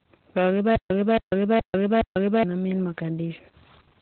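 From the start, the whole clip carries heavy Opus voice compression damage. Nothing is present above about 4.5 kHz, so the speech is narrowband, muffled and hoarse, with a slightly robotic texture. The coarse excitation coding fits SILK mode at a very low bitrate, around 8 kbps.

From 0.76 s to 2.43 s there is a stutter with silent gaps. The same 273 ms burst plays four times, each followed by 146 ms of digital silence, repeating every 419 ms. The likely cause is a stalled stream replaying its last fragment on each retry, so the audio for that span is lost.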